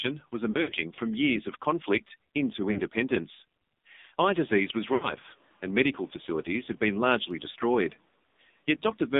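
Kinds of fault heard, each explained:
AMR narrowband mobile codec: Speech passes a 2G/3G vocal-tract model at 5.9 kbit/s, heavily damaged. Only about 200 Hz to 3.7 kHz survives. It sounds buzzy and synthetic.
Lost AMR speech frames: Failed frames are patched from the last good settings with falling gain. Dropouts come near 0.5 s, 2.7 s, 4.9 s and 7.5 s, each lasting 20 to 100 ms in total.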